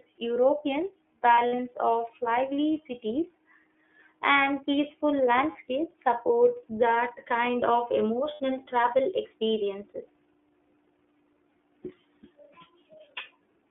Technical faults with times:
0.00-13.71 iLBC codec
1.35-1.59 lost iLBC frames
5.52-5.56 lost iLBC frames
8.34-8.40 lost iLBC frames

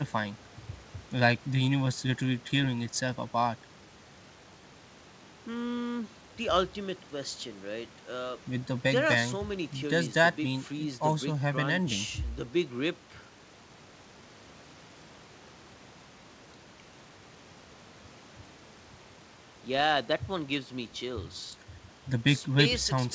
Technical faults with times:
none

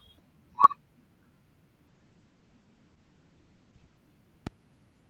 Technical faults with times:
0.64-0.66 loud pop
1.88-4.05 call bitrate drop
4.47-4.49 loud pop

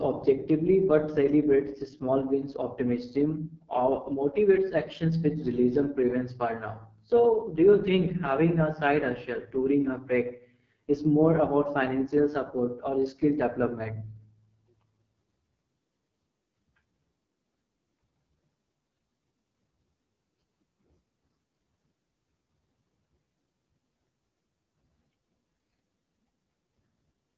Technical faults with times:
0.00-27.38 AMR wideband (HD Voice) codec

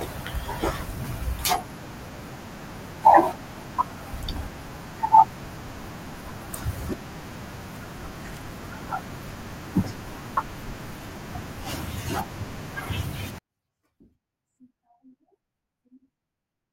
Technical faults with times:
13.38-16.73 24-bit alignment error (too quiet)

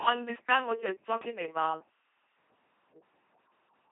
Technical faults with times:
0.00-3.91 LPC-10 vocoder
0.35-2.37 low bit depth with dither

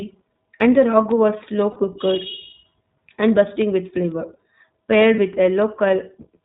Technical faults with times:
0.00-6.45 iLBC codec
1.72-1.77 lost iLBC frames
5.16-5.19 lost iLBC frames

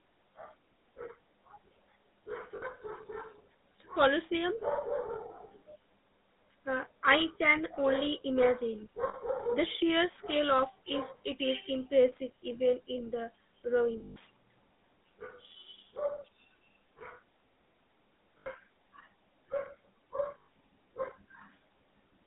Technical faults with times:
0.00-22.26 GSM full-rate codec
2.56-2.65 lost GSM frames
9.08-9.15 lost GSM frames
14.00-14.17 lost GSM frames
18.38-18.49 lost GSM frames
20.38-20.48 lost GSM frames

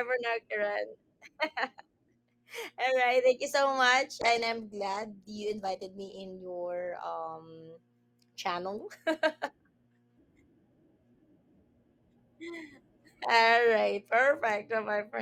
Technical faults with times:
4.23-7.17 call bitrate drop

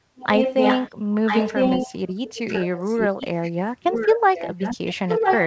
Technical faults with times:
0.16-0.91 echo leak
1.26-3.52 echo leak
3.89-5.46 echo leak

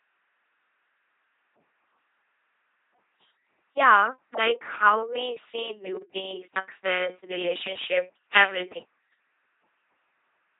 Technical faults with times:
0.00-10.59 LPC-10 vocoder

